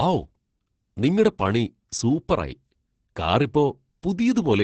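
Heavy Opus voice compression runs throughout this speech. Nothing survives above 8.4 kHz. Coarse linear-prediction coding, pointing to roughly 10 kbps, leaves it muffled, hoarse and slightly robotic.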